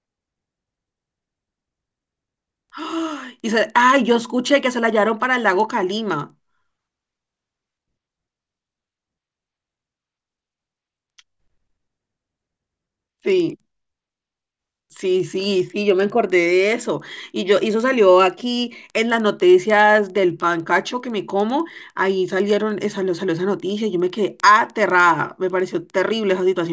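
Throughout the speech, a resampler restarted on every block puts a faint tick every 100 ms, a steady 10 Hz pattern that sits under the voice and drops away in pauses. Each block was rate-converted in isolation, apparently a 44.1 kHz to 16 kHz conversion, so the filter lacked real neighbouring samples at both edges. The resulting discontinuity at every block boundary is what produces the regular clicking.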